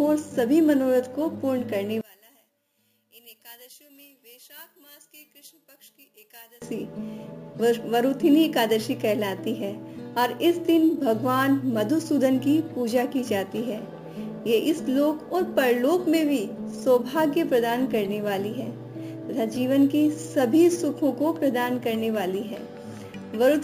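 The audio drops sharply from 2.01 to 6.62 s, falling by about 26 dB. Centred content nearly vanishes, leaving a faint residue. This is likely one channel inverted, so both channels' shared signal cancels when summed to mono.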